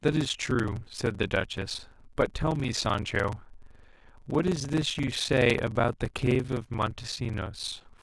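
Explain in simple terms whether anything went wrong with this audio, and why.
Something went wrong here: a block size mismatch (padded). From start to finish, one stage hands over chunks a bit too short for the next, which fills the gap with silence. That causes a steady buzz around 23 Hz and speech running at about 0.86 speed, with the same timbre.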